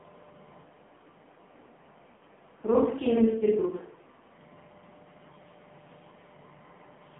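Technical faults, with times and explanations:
Throughout: AMR narrowband mobile codec. The speech is confined to roughly 150 Hz to 3.4 kHz with nothing above 4 kHz, and heavy codec damage leaves it buzzy and synthetic, which fits a low mode around 5.9 kbps, where too few pulses per subframe drive the vocal tract model.
2.16 to 2.21 s: lost AMR speech frames. About 40 ms goes missing, which points to two dropped frames, and the decoder papers over the gap by repeating the last good pitch and vocal tract settings at falling gain, so you hear a short smeared dip before the speech returns rough for a moment.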